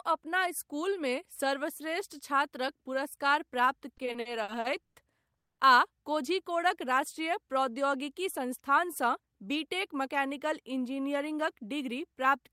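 Right after "छात्रक पुरस्कार प्राप्त", from 3.97 to 4.98 s, the speech hits repeated stalls (stutter): packets arrive late, the jitter buffer keeps emptying, and seven stretched gaps (longest 130 ms) make it drag.

At 5.37 to 5.61 s there's a call audio freeze, 210 ms of silence, likely from held-up packets. The speech then picks up where it stopped.

From 8.15 to 10.07 s a jitter buffer speed-up trims around 150 ms in tiny pitch-period slices. The speech runs at 106% with unchanged pitch, so it sounds a bit rushed.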